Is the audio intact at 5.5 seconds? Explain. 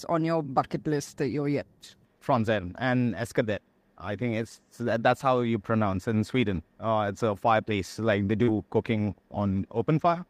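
Yes, at 5.5 seconds the audio is intact, with no fault present at that moment.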